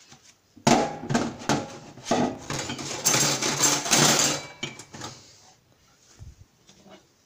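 At 2.35 s there's a short burst of processor overload crackle that runs to about 2.56 s, so roughly a fifth of a second. The processor couldn't keep up with its tiny audio buffers, a few milliseconds each, and missed a handful of deadlines in quick succession. Each miss dropped out to silence with hard edges, and those little gaps pile up into a gritty, tearing crackle over the sound that clears once the load eases.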